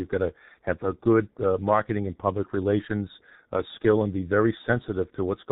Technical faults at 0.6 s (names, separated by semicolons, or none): G.723.1 codec